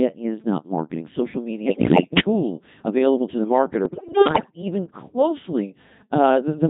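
Codec 2 vocoder compression runs through the entire speech clip. The decoder does not rebuild the original waveform. It resynthesises the voice from sine waves driven by transmitted pitch, voicing, energy and spectral-envelope values. The result here is heavily damaged: robotic, buzzy speech with a synthetic timbre. The rate is around 2.4 kbit/s, one of the higher Codec 2 modes.

Bit errors on digital voice radio hit twice. The first burst runs from 1.66 to 2.20 s and ends just before "tool available to the". The second runs from 3.86 to 4.62 s and starts just after "tool available to the". At a very low bitrate every corrupted bit alters a whole frame's pitch, level, voicing or spectral shape. A rate of several percent therefore makes the voice lurch in pitch and loudness and break into warbling, bleeping gibberish.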